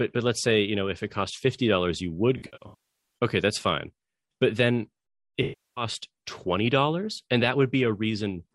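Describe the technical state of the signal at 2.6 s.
AAC frame loss with concealment, 2.37–3.17 s: scattered dropped frames, runs to roughly 150 ms, refilled from the last good spectrum, heard as smeared, noisy patches.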